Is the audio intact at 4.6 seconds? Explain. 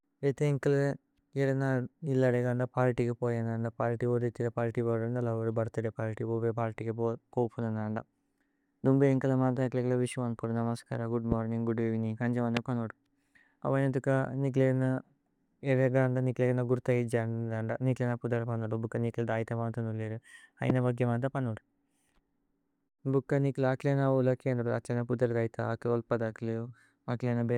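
Yes, the speech at 4.6 seconds is intact, with no dropout, click, distortion or other fault at that moment.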